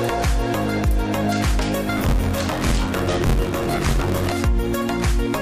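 From about 1.96 s to 4.32 s there's buffer tearing: a steady robotic rattle at about 86 Hz, which fits a 512-sample buffer. The writer and the hardware read pointer have drifted so they cross inside each period, so roughly a third of every buffer plays audio about 20 ms stale, spliced in with hard edges on both sides. That repeating seam gives the buzz, riding on the sound itself.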